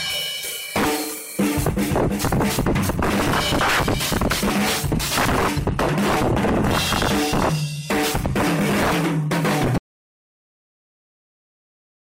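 At 9.78 s the sound stops abruptly and never returns: the final stretch, about 2.3 s running to the end, is an audio dropout to silence. There is no fade and no lingering room tone, only silence. Whatever happened in that span is lost. The likely cause is that the input feeding the recorder was cut off, through a disconnected device, a failed link or an accidental mute, while writing carried on regardless.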